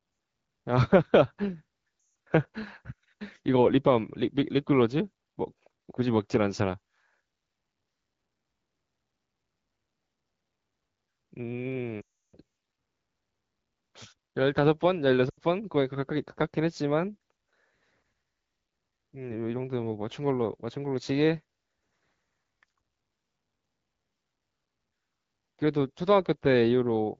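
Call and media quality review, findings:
Lost AMR speech frames, 1.99–2.15 s: speech drops to near silence within two frames, then returns weak. Decoder concealment repeating last good pitch and vocal-tract parameters at falling gain. 12.01–12.37 s: 320 ms run, decays to near silence before rough recovery. 15.29–15.39 s: 80 ms run, drops to near silence within two frames. Radio bit errors failing frame checksums. Wideband path at clear-quality rate, light coding texture only.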